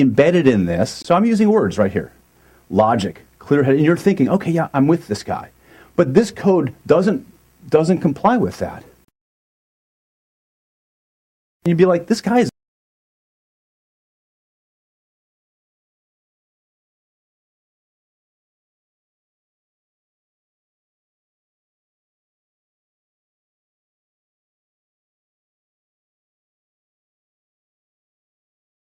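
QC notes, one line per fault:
1.02 s and 9.05 s, gap between stream segments: segment timestamps failed to meet, leaving the player to fill the shortfall with silence. Hard-edged dropouts of about 22 ms and 36 ms cut into the sound; nothing is lost, only delayed.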